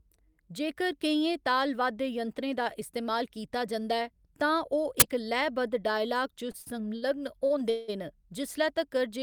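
At 5.00–5.02 s an uninitialised buffer plays: a 20 ms block of leftover memory is output as samples, giving a short, loud burst of digital noise. Short stalls from late packets follow at 6.51, 6.62, 6.96 and 7.46 s. The jitter buffer runs dry, so the last sound is stretched by 25 to 61 ms before resuming without loss. Each is heard as a held sound with a slight buzz or dip. At 7.70–7.90 s there is a call audio freeze. The sound is held and continued for about 180 ms as a fading buzz or hiss, then picks up where it stopped. This was likely caused by packets delayed in transit emptying the jitter buffer.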